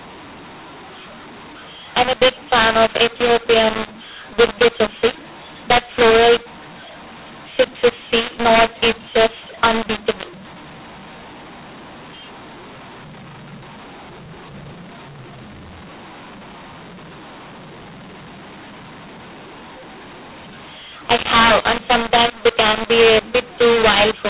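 From start to end the speech shows a mu-law and A-law mix-up. It was coded as A-law but decoded as mu-law. Sample levels come out scrambled, too loud or too soft. Voices sound harsh and gritty. Pauses fill with hiss. The narrow telephone band stays intact.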